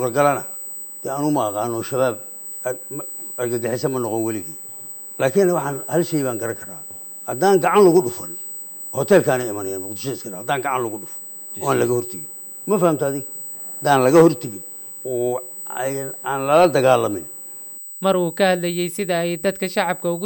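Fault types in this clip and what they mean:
USB whine: a fixed-pitch tone runs throughout, based at 8 kHz and loudest at its 16 kHz harmonic, roughly 15 dB below the sound. The 125-microsecond microframes of the USB bus draw current in bursts, and this leaks into the audio through power or ground.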